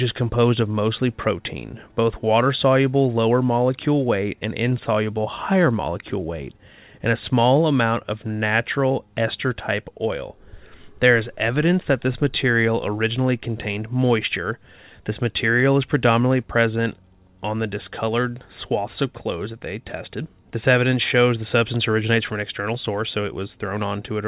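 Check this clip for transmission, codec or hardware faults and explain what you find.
No faults found in this speech recording.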